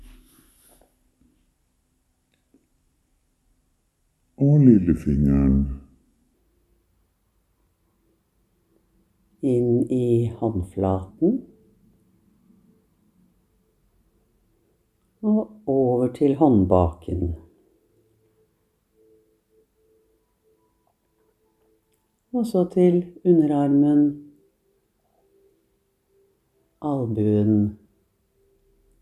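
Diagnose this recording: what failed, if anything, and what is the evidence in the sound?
A wrong sample rate fault at the playback stage affects the opening section, from 0.00 to 6.34 s. There, the sound runs slow and sits low, at about 0.73 times normal speed and about 5.6 semitones down, with tempo and pitch shifted together by the same ratio. That locked relationship means the samples were clocked out too slowly with no resampling. The ratio fits 44.1 kHz material played back at 32 kHz.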